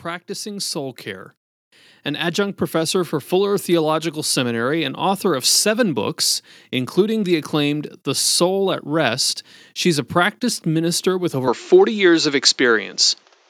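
From 0.26 to 1.34 s, then again from 2.07 to 3.19 s, automatic gain rising lifts everything by about 4 dB, voice and background swelling together as the AGC chases a quiet input.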